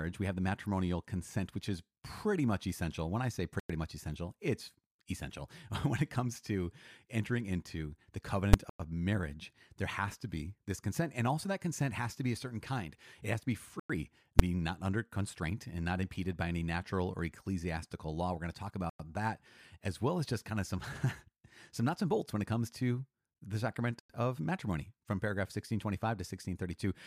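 Gap between chunks at 3.6, 8.7, 13.8, 18.9 and 24.0 s: hard-edged 100 ms holes every 5 s, where each chunk join was padded with silence or started late. Invalid numbers at full scale at 8.54 s, just after "to entering into the", and at 14.39 s: a 5.8 ms stretch, fitting a 256-sample block, forced to maximum value by a failed calculation, heard as a single sharp bang.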